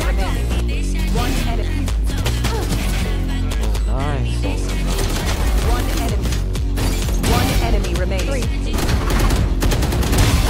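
At 2.83 to 3.03 s and again at 5.25 to 5.45 s, frames out of order: two adjacent blocks of about 96 ms each play swapped, giving a garbled flutter. Unlike a dropout, nothing is missing and the timing stays intact. From 5.80 to 6.02 s comes loose connector crackle, an intermittent contact chopping the signal into an irregular burst of scratching. Its randomness separates it from the neat, block-bounded swaps. At 8.73 to 8.89 s the frames-out-of-order flutter returns with shorter 72 ms blocks.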